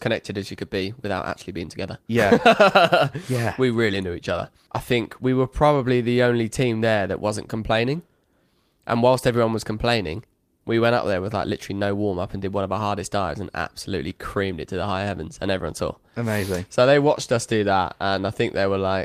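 No technical faults can be heard anywhere in the speech.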